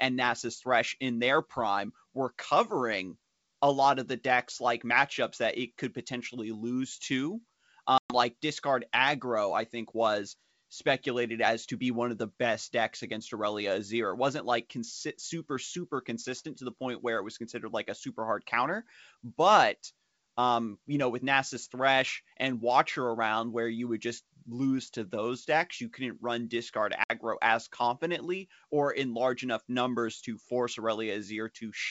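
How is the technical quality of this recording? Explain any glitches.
The recording suffers two dropouts, heard through clear wideband speech consistent with G.722 coding. At 7.98–8.15 s and 27.04–27.11 s, packet loss on an ADPCM call left hard-edged silent holes of about 120 ms and 60 ms. The decoder's adaptive predictor and step size then drift from the sender's, so speech resumes slightly distorted.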